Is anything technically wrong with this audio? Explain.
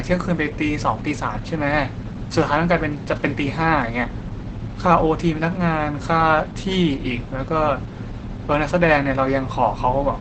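Yes. Opus compression runs through the whole clip. The audio was likely encoded at a very low rate, one that fits roughly 12 kbps, where the encoder drops into its speech-oriented mode and keeps only a wideband signal. Nothing remains above 8.7 kHz, so the speech sounds muffled and dull. The heavy coding also leaves a hoarse, rough texture on the speech, since too few bits remain to describe the signal in detail.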